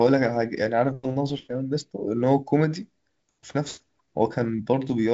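Speech, with no technical fault anywhere in the recording. It has passed through G.722 wideband telephone coding at 56 kbit/s, so nothing is heard above about 7.7 kHz and the coding leaves a light, slightly grainy texture.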